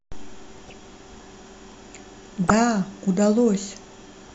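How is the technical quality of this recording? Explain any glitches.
The speech is interrupted twice by DAB burbling, from 0.58 to 0.73 s and from 2.44 to 2.54 s. Weak reception let bit errors slip past error correction into the MP2 audio data, at a rate of a few tenths of a percent. Corrupted samples put short blips of noise in individual sub-bands. Each burst spans several frames and is heard as blips over the speech.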